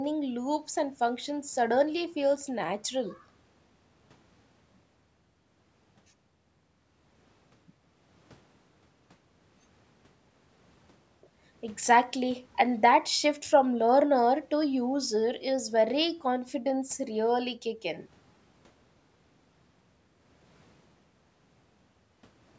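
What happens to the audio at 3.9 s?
Nothing goes wrong at 3.9 s: the speech carries on intact through that moment, with only the expected effect of the call microphone processing, which trims the lowest bass and leaves nothing above 8 kHz.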